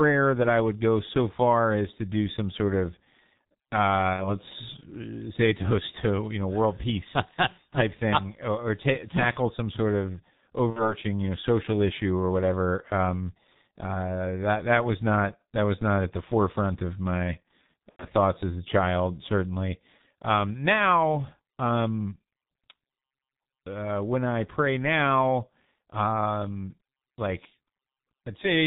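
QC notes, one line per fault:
Throughout: G.723.1 codec. The speech is muffled and hoarse, with smeared, indistinct consonants and nothing audible above 4 kHz. The damage is heavy. The dull, rough quality fits a low-rate telephony codec at about 6.3 kbit/s, working in 30 ms frames. The narrow band removes the upper range, and the codec's slowly updated voice model can't follow fast changes, so transitions between sounds blur.
4.14–4.37 s, 10.70–10.95 s, 17.91–18.06 s: VoIP packet loss concealed by the speech codec. Each is a brief stretched sound that fades, followed by weak, distorted speech. They fall before "uh say a toast", between "tackle some sort of" and "you know social issue", and between "the forefront of my" and "thoughts as a child". The decoder repeated its last pitch and filter with falling gain. The gaps fit about 60, 60 and 90 ms of missing audio, and recovery lags because each frame builds on the previous one.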